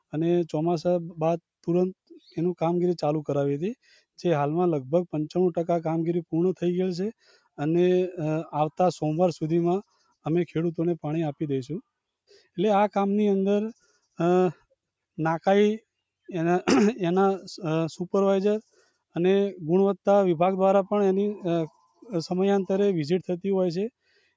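Brief dips, where the sound sinks and seems to lose its tail, occur at 7.21–7.59, 9.92–10.26, 18.77–19.15, 21.7–22.04 and 24.05–24.29 s, each affecting roughly 150 to 200 ms of sound. These are sound cut by the noise suppressor: it mistook sustained or decaying parts of the sound for noise and pulled them down by about 12 to 17 dB, while the sharper onsets slipped through. The call microphone processing limits the band to nothing above 8 kHz.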